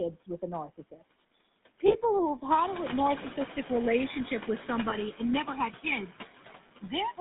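Throughout, the speech carries the buzzy, gravelly roughness of the GSM full-rate codec: the pulse-driven excitation model grates on the voice, and the band runs only from 150 Hz to 3.7 kHz, which fits the 13 kbps full-rate coder. The channels are drifting apart. A clock mismatch of around 200 ppm lets the inter-channel delay slide to roughly a millisecond by the end, so in mono the comb notches sweep slowly and give a slow flanging. Noise suppressor artifacts are also present. The suppressor pulls steady noise down by about 16 dB between phrases and lets it rise back under the voice. The room noise steps up by about 11 dB around 2.5 s. Lost GSM frames occur at 1.88 s, at 4.90 s between "a narcissistic relationship with" and "and never had", and at 6.68 s. Each fits a single lost 20 ms frame, where the previous frame is repeated and is heard as a brief rough, metallic ring.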